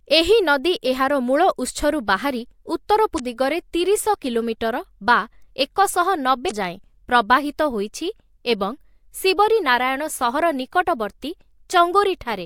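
At 3.16 s a short glitch cuts through the speech, lasting until 3.20 s. It returns at 6.47 s, ending at 6.51 s. Both are damaged data in a compressed stream. Part of the encoded data was corrupted. The decoder misread those frames and lost its place. It then hunted for the next valid frame header before playing normally again. Each burst lasts about 40 ms.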